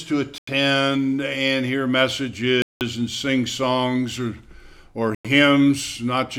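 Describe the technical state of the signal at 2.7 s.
At 2.7 s the signal is in a dropout: the sound cuts to full silence from 2.62 s to 2.81 s, a gap of roughly 0.19 s, then resumes. The pattern is a Bluetooth stall, likely caused by radio interference delaying packets so the receiver's buffer emptied and playback halted until the retransmitted data arrived. The output simply goes dead for that span rather than distorting, and restarts abruptly when audio flow returns.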